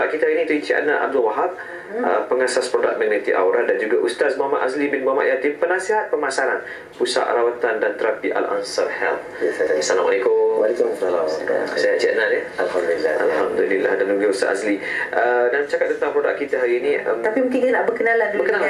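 Nothing here stands out as a technical problem; the audio runs along without any glitch, dropout or distortion worth flagging.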